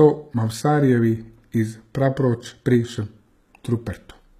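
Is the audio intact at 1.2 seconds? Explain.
No, not really. At 1.2 seconds the speech carries the same plainly audible coding damage as the rest of the clip, and it runs the whole way through. The treble sounds synthetic: s sounds come out gritty and lispy, and nothing reaches above about 14.9 kHz. That points to likely HE-AAC compression at a very low bitrate, around 20 kbps. Only the lower band is really coded, and the top is copied up from below, so its harmonics don't line up.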